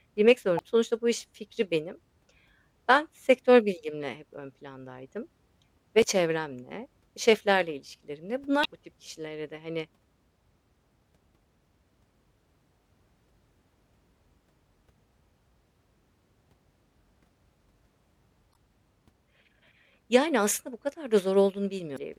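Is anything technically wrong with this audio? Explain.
Yes, the speech carries five short glitches from damaged data in a compressed stream, at 0.56–0.61 s, 6.00–6.04 s, 8.61–8.66 s (just before "bu tip kişilere de"), 18.51–18.56 s and 21.94–21.99 s. Corrupted bytes make the decoder misread frames and hunt for the next valid header, so each spot is a brief chirp or blip of about 45 ms.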